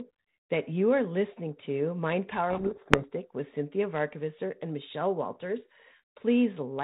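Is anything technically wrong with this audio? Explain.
Yes. From 2.5 to 3.06 s there is a codec payload misread. The decoder takes G.726 code words in the wrong bit order and rebuilds each sample from scrambled differences, burying the speech in harsh distortion. Unlike low-bitrate G.726 rasp, it begins and ends abruptly against the surrounding 32 kbit/s sound.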